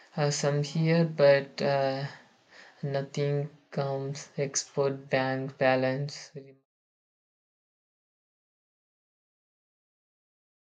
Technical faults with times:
none

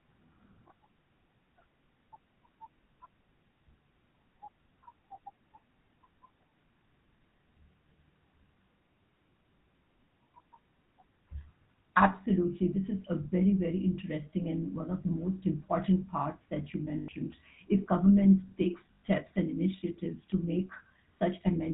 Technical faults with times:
0.00-21.74 GSM full-rate codec
0.68-0.71 lost GSM frames
16.98-17.09 lost GSM frames
18.95-19.01 lost GSM frames

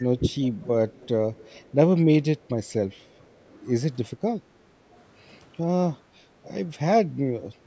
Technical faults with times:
0.00-0.05 speech suppressed in double talk
0.63-1.08 echo leak
1.37-1.72 echo leak
3.75-7.01 mains hum
4.72-4.79 speech suppressed in double talk
4.95-5.01 echo leak

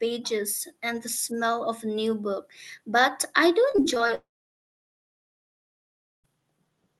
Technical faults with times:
3.71-4.11 repeated packet loss (robotic sound)
4.15-6.26 long network dropout

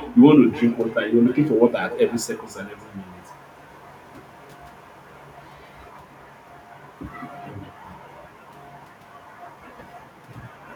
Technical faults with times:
0.00-10.75 echo with no canceller

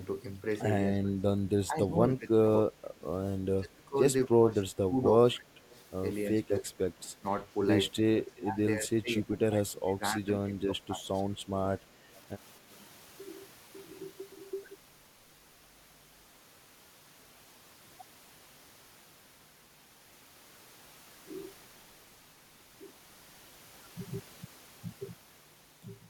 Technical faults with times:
0.91-3.05 speech suppressed in double talk
3.57-5.72 speech suppressed in double talk
5.73-5.82 echo leak
6.40-7.26 speech suppressed in double talk
7.95-11.27 speech suppressed in double talk
11.89-12.11 speech suppressed in double talk

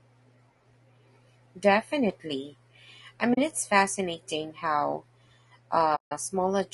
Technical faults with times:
0.00-6.73 low-delay AAC compression
3.33-3.38 AAC frame loss with muting
5.95-6.12 AAC frame loss with muting

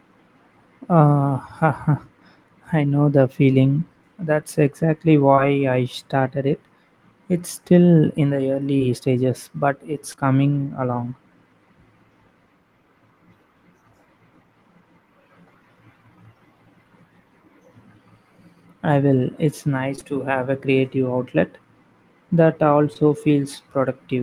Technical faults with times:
5.35-5.40 short concealed packet loss
8.78-8.82 short concealed packet loss
10.12-10.19 short concealed packet loss
19.95-20.03 short concealed packet loss
22.93-22.97 short concealed packet loss

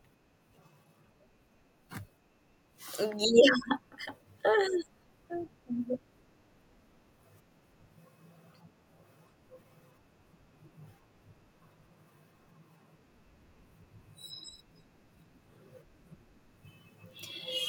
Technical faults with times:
4.57-8.47 sample clock jitter

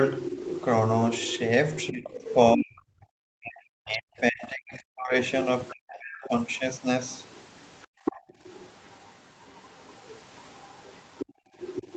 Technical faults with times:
0.20-2.35 other side's voice leaking through
1.91-5.14 speech suppressed in double talk
5.67-6.29 other side's voice leaking through
5.72-6.29 speech suppressed in double talk
7.06-11.96 other side's voice leaking through
7.87-8.40 background gated by the echo canceller
11.26-11.55 background gated by the echo canceller

